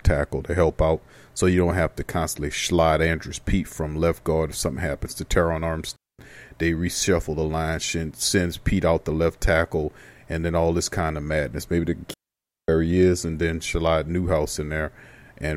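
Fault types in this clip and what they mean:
Digital wireless dropout, 5.96–6.19 s and 12.14–12.68 s: the radio link lost data and the receiver muted with a quick fade, leaving clean near-silent holes of 0.23 s and 0.55 s, the second right before "he is and then", with no noise burst.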